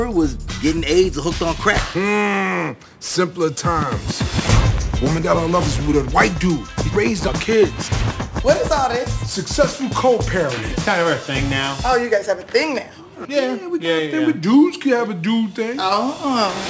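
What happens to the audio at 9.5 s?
At 9.5 s you're hearing aliasing, and it runs through the whole clip, not just that moment. Content above 8 kHz wasn't filtered before the rate came down, which fits a drop to 16 kHz, so it folds back as unrelated tones roughly 20 dB under the signal. High-end detail turns gritty and metallic, with the spectrum crowding hard against 8 kHz.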